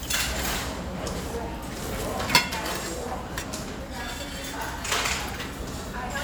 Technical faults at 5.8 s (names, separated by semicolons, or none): none